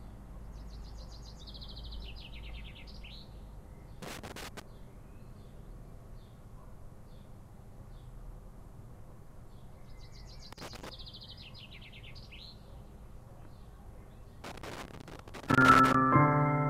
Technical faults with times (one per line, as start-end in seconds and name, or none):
4.02-4.62 loose connector crackle
10.52-10.89 loose connector crackle
14.44-15.95 loose connector crackle